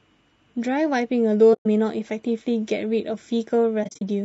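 Low-delay AAC compression runs through the whole of this speech clip: the voice sounds rough and grainy, with noise filling the gaps between harmonics and a thin, synthetic top band. The likely cause is AAC-ELD coding at a low bitrate of around 32 kbps. AAC frame loss with muting then appears twice. From 1.53 to 1.66 s there is a soft-edged hole of about 120 ms, because the decoder zeroes the missing spectrum and the overlapping windows fade in and out. From 3.83 to 4.02 s, about 120 ms of audio drops out in short scattered gaps over about 220 ms, the longest only a few tens of milliseconds.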